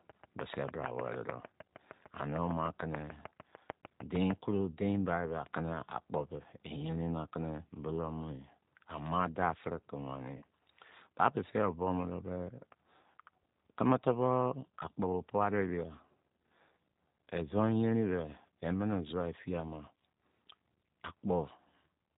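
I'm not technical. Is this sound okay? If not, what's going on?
No, it isn't quite okay. From start to finish the speech has the slightly rough, synthetic, phone-like quality of the G.729 codec. This is a low-rate internet-calling format that rebuilds the voice from a simplified model of the throat and pitch rather than storing the actual sound, and it drops everything above 4 kHz. The words stay clear, but they lose their natural crispness and airiness.

For the first few seconds, from 0.10 to 4.32 s, a steady ticking rides over the speech, about six or seven clicks every second and some thirty in all, each one sharp and much louder than the voice. It stops just before "koro dein bai be". This is a train of clicks, most likely from electrical interference or a faulty connection or power supply injecting the same pulse at an even pace.

Right after "daafiri ke", at 10.37 s, the voice briefly smears into a short, fading blur lasting about 40 ms. 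This is VoIP packet loss concealed by the speech codec. A couple of small chunks of audio went missing in transit, and the decoder filled the gap by stretching out the last bit of voice it had while fading it down, so the speech sounds slightly off for a moment afterwards.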